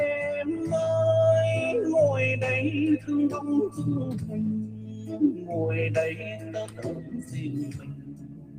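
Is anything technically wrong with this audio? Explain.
Yes. A noise suppressor applied to music or sounds runs through the whole clip. A suppressor tuned for speech reads steady tones and decays as noise and pulls them down, swinging the level by roughly 15 dB. Attacks survive while sustains thin and pump. Unlike a plain gate, the loss follows how steady the sound is, not how loud.

The sound is also cut by the noise suppressor at 4.62 to 5.5 s (drop of about 10 dB), 6.14 to 7.37 s (about 9 dB), and from 7.65 s to the end (about 10 dB). In each stretch, held or fading material sinks and its tail shortens while sudden onsets still come through. This separates it from a dropout, which would silence everything equally.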